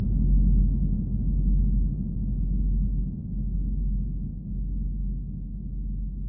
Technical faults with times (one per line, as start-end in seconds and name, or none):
none